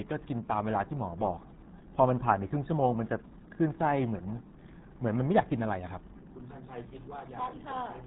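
From start to finish the speech sounds muffled and gargly, with a watery, bubbling texture around every syllable and no brightness at all, since nothing above about 3.9 kHz comes through. This is the RealAudio 14.4 codec at work, the RealAudio 1 speech coder built for dial-up modems. Its bitrate of about 8 kbit/s is far too low to carry detail, so the codec damage here is heavy and runs through the whole clip.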